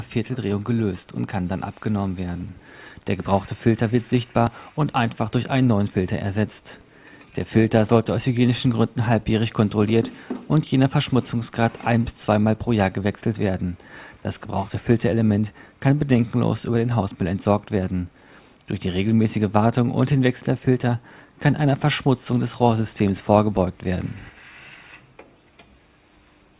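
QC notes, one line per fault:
No technical faults were detected anywhere in the signal.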